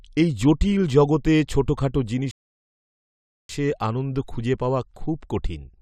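A rebuffering stall runs from 2.31 to 3.49 s: after "এই জটিল জগতে ছোটখাটো" the speech drops to silence for about 1.18 s while the player waits for more data. It then picks up at "আনন্দ খুঁজে পাওয়া" with nothing skipped, only time added.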